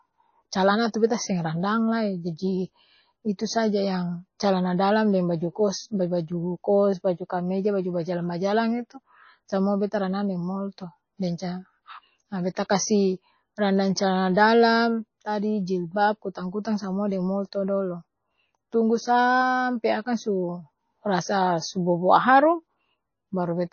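Throughout the speech recording the treble stops dead, with nothing audible above 6.6 kHz, and the remaining sound has a plainly watery, swirling quality, as faint detail flickers in and out from moment to moment. That pattern points to heavy MP3 compression as the likely cause, at a very low rate of roughly 25 kbps. The starved encoder discarded the top band and zeroed weak frequency lines frame by frame.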